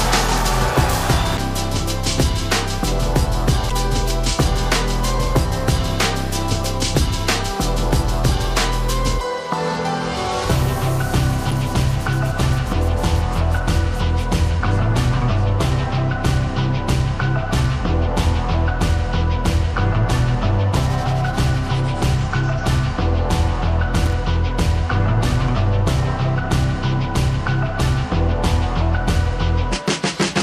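Damaged data in a compressed stream, bytes lost or overwritten, makes the decoder misread frames and lose sync three times, at 1.35, 3.67 and 11.48 s. Each is heard as a brief chirp or blip of about 40 ms. A loose connector crackle comes from a worn or dirty contact making and breaking rapidly, which chops the signal at 24.06 to 24.13 s. It produces a short, irregular burst of scratchy crackle lasting roughly 70 ms.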